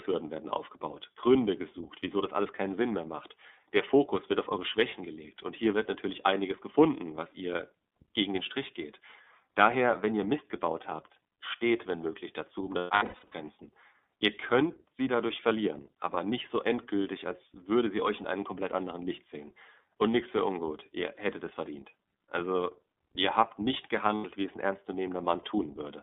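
Throughout, the speech sounds thin, slightly rough and synthetic, confined to roughly 250 Hz to 3.6 kHz. This is the iLBC codec at work, coding each 30 ms frame independently at a rate that fits its 13.33 kbps mode, with plainly audible damage.

From 12.78 to 13.33 s, just after "wenn möglich dazu um", the speech breaks into held, buzzy, vowel-like fragments. These are lost iLBC frames: about 390 ms went missing, scattered over 540 ms in runs of up to about a tenth of a second. The decoder filled each gap by repeating the last pitch cycle mixed with noise. At 24.15 to 24.25 s, between "ihr habt nicht" and "wie es ein", a shorter 90 ms loss gives a brief buzzy hold before the speech returns cleanly.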